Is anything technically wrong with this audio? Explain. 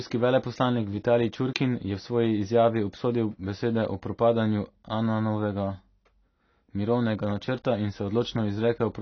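Yes. Throughout the speech there is AAC compression damage. The top end stops near 6.6 kHz, so the sound is dull. Sibilants and sustained sounds take on a warbling, fizzy texture. This is likely low-bitrate AAC-LC, which drops and thins high-frequency detail to save data.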